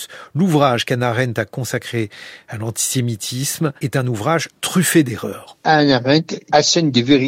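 No dropouts, clipping, glitches or other technical faults can be heard anywhere in the recording.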